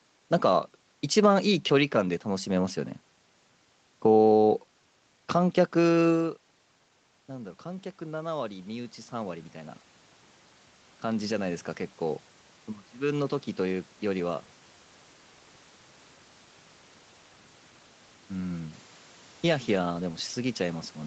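Around 6 seconds the talker drops away from the mic, the level falling by about 14 dB. From 7.28 to 9.85 s you can hear the automatic gain rising as the gain control notices the quieter input and pushes its gain up by about 6 dB. It does this slowly, so the voice and the room noise swell together over those two and a half seconds instead of jumping.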